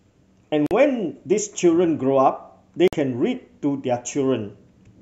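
Speech that cuts briefly to silence at 0.66 s for about 45 ms and at 2.88 s for about 50 ms, then resumes: a likely Bluetooth stall, where the headphone buffer ran dry.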